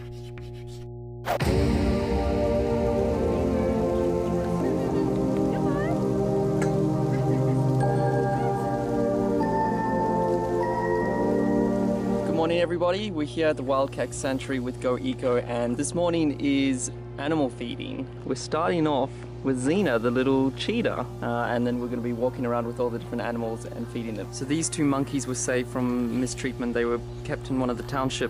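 Mains hum runs throughout: a steady 60 Hz tone with low harmonics, sitting only about 10 dB below the signal, from power-line coupling through a ground loop or transformer.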